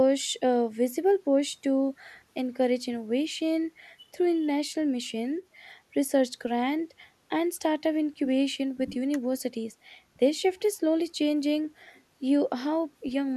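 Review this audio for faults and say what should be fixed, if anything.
No audible faults; nothing needs fixing.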